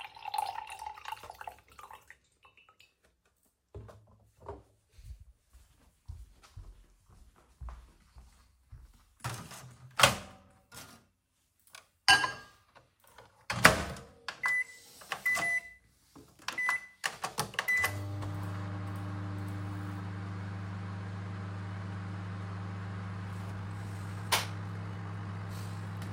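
Time-stretched section, 23.49 s to 26.13 s: the pace abruptly speeds up 1.56 times while the pitch holds, sounding rushed, likely from software dropping short pieces.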